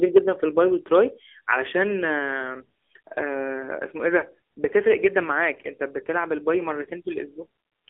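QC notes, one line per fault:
Throughout: AMR narrowband mobile codec. The low-rate vocal-tract model, consistent with about 7.4 kbps, and the 300 Hz to 3.5 kHz line band leave speech thin, buzzy and plainly synthetic.
4.20–4.24 s: lost AMR speech frames. The decoder covered a dropped frame, about 20 ms of audio, by reusing earlier pitch and vocal-tract settings at reduced gain, producing a brief dip or warble.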